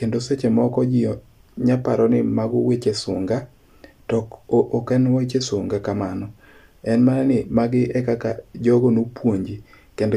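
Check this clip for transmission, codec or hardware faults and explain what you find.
Nothing here points to a transmission, codec or hardware problem; the speech comes through without any audible fault.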